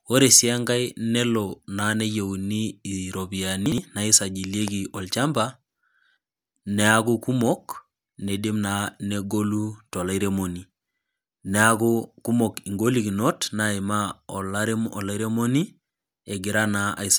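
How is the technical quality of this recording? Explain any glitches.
One glitch stands out, at 3.66 to 3.78 s: chunks out of order. Two adjacent 60 ms pieces of the speech play in swapped order, because one chunk arrived or was written one slot late and landed after the chunk that should follow it. Nothing goes missing, but the sound briefly jumbles, with three hard joins. On a waveform, those joins show as sudden amplitude jumps. On a spectrogram, they appear as thin vertical lines where formant tracks break and resume out of sequence.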